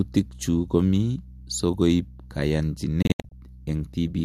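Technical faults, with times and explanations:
3.02–3.32 s digital broadcast dropout: corrupted frames muted the receiver, leaving short silent holes totalling 168 ms, seen as flat waveform gaps with 3 ms fades.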